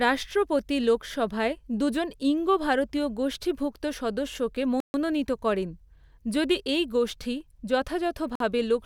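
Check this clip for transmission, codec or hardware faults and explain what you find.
Two short dropouts in the speech, both sounding like a Bluetooth stall. At 4.80 to 4.94 s, right after "ঈঙ্গ ভারতীয় গোষ্ঠীভুক্ত সদস্যকে", the sound cuts to silence for 138 ms, and again at 8.35 to 8.40 s for 49 ms, then resumes. The likely cause is interference delaying packets until the headphone buffer ran dry.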